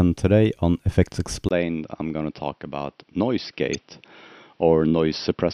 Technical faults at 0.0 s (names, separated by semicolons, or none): none